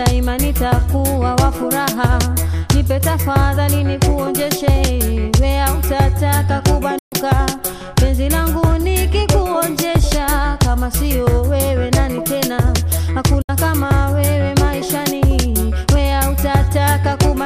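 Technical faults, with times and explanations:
6.98 to 7.13 s, digital broadcast dropout: Sound fades out over 8 ms and stays silent for 128 ms. The receiver muted bad frames, which fits about four 32 ms frames.
13.42 to 13.50 s, digital broadcast dropout: A shorter 64 ms hole with the same quick 8 ms fade. Corrupted frames were muted, and the programme returns afterwards.
16.12 to 17.37 s, periodic USB or driver dropouts: About seven ticks, one every 0.25 s. Each time a background task blocked the driver, and a tiny sliver of audio was skipped.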